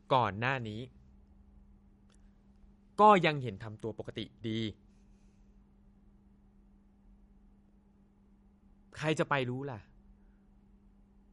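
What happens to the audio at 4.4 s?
At 4.4 s the speech carries the same damage as the whole clip, likely from MP3 compression at a low bitrate, around 48 kbps. Starved of bits, the encoder cut everything above 11.1 kHz and dropped weak detail frame by frame, leaving a dull, watery, swirly sound with smeared consonants.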